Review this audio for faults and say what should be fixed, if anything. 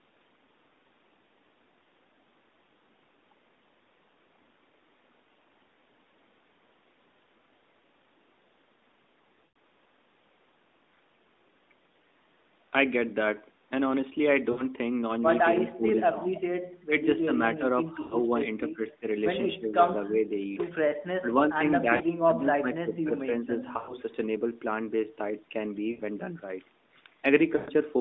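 Lost AMR speech frames at 9.46–9.54, 14.52–14.63, 18.02–18.16, 21.96–22.03, 23.78–23.94, 25.92–26.02 and 27.56–27.71 s. The decoder repeats stale pitch with falling gain, so each gap of 40 to 120 ms sounds like a smeared warble fading down. On a spectrogram, frozen horizontal harmonics fade out, and the waveform shows a tapering envelope. Stronger channel protection or a better radio link would prevent these.

Speech suppressed in double talk at 15.61–16.26, 16.88–16.92, 17.25–17.63, 18.72–19.04, 19.58–19.71, 20.08–20.23 and 21.2–21.28 s. These are brief choppy dips of about 5 to 20 dB, likely the echo canceller ducking the talker while the far end spoke. The waveform shows notched amplitude and the spectrogram shows faded bands. Retuning the echo canceller's double-talk detection would prevent this.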